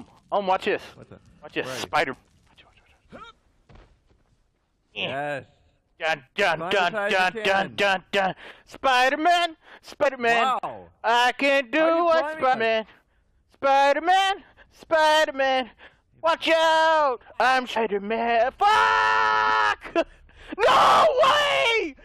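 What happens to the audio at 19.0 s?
Nothing goes wrong at 19.0 s; the audio plays through that moment intact, with no dropout, click, glitch or other fault.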